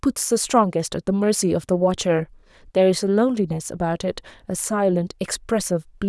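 No technical faults can be heard in the speech.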